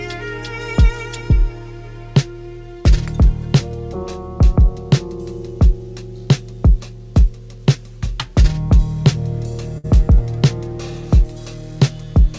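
Right around 9.78 to 9.86 s there's a burst of packet loss: the receiver stretched the last bit of sound into a short fading fill of about 58 ms, then picked up again with roughly 60 ms simply gone, all riding on a call path that tops out at 8 kHz.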